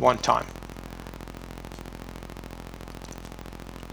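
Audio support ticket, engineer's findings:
Filter restarted on every block, present throughout the clip. Symptom: steady low buzz at about 43.1 Hz, riding on the audio and following its level. Mechanism: filter state cleared at each processing block, so every block starts from silence and opens with a small transient. Tick rate fits a 1024-sample block. Probable component: block-based filter stage not carrying its state between buffers.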